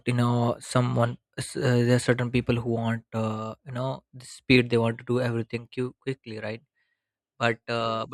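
Nothing goes wrong anywhere in this recording, so there's no technical fault to point to at any moment.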